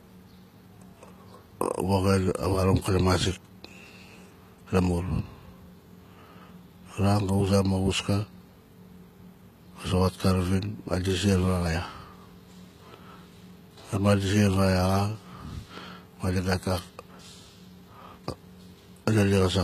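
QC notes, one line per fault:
Throughout, likely HE-AAC compression: the s sounds come out gritty and a bit lispy, with a metallic sheen up top and nothing above 14.9 kHz. The treble is being rebuilt from copied lower bands rather than coded, which fits a bitrate around 20 kbps.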